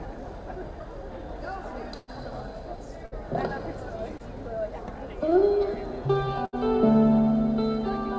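The sound comes through a call path with nothing above 8 kHz, which fits a wideband codec such as G.722. A burst of packet loss hits from 1.98 to 2.10 s. About 100 ms never arrived. The receiver stretched the last sound and faded it. Two more bursts follow, at 3.06 to 3.14 s and 6.45 to 6.55 s, losing 60 and 80 ms. Each is a fading buzz or hiss, then a jump ahead.

Short concealed packet loss occurs from 4.18 to 4.21 s. Roughly 20 ms went missing. The decoder patched it by extending the previous sound and blending back. It is heard as a brief smear or wobble.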